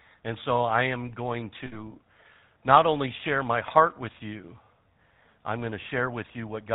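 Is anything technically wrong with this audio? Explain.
Yes, two problems. The whole clip has the GSM full-rate codec sound. The voice is cut off at 4 kHz and has a buzzy, gravelly roughness. That fits a 13 kbps full-rate coder, which models the vocal tract and drives it with sparse, regularly spaced pulses instead of the real excitation.

There are also lost GSM frames at 1.66 to 1.81 s and at 5.82 to 5.86 s. In each gap the decoder replays the last good frame's settings, so the sound smears into a brief rough, metallic ring. The first dropout is longer and fits about three 20 ms frames, while the second fits a single frame.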